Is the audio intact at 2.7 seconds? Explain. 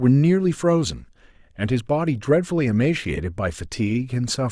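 Yes, the audio at 2.7 seconds is intact, with no fault of any kind at that moment.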